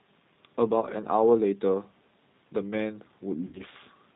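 The whole clip runs through the G.729 codec at 8 kbit/s, so nothing above 4 kHz survives and the speech comes out noticeably rough and synthetic. At 0.81 to 0.86 s there's VoIP packet loss concealed by the speech codec, with about 20 ms missing (roughly one packet) and patched by stretching the last sound. The same thing happens at 3.47 to 3.61 s, where about 60 ms is lost (about three packets). It turns into a fading smear that stays weak a little after the signal comes back.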